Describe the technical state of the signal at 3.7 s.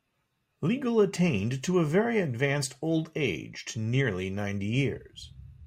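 At 3.7 s the speech signal is intact, with no dropout, clipping, distortion or other fault present.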